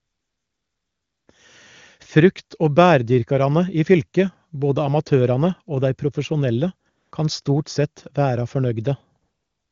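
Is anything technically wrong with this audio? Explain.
Yes. AMR comfort noise appears at 0 to 1.27 s, 6.89 to 7.11 s, and 9.21 s to the end. The phone stopped sending speech frames, so the receiver filled those gaps with smooth synthetic noise that switches in and out.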